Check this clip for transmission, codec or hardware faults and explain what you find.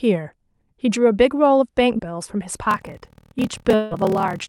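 Three faults show up: a tiny glitch early, then a padding problem that runs through the back half, with a longer gap sitting inside it.

Short concealed packet loss, 1.97 to 2.01 s: about 20 ms of audio never arrived in time, so the decoder stretched the last bit of sound for roughly 13 ms before blending back. You get a quick smear or wobble right there.

Block size mismatch (padded), 2.69 s to the end: each block comes through short and the remainder is zero-filled, which fits a stage writing 1024-sample blocks into a larger read. That leaves a 38.3 Hz buzz, and the speech drags at 0.889 times normal speed with the timbre staying about where it was.

Long network dropout, 3.75 to 3.93 s: the sound holds on as a fading buzzy continuation for about 160 ms and never drops to silence. Then the speech picks up further along with that stretch gone, likely because nothing arrived over the network for that time.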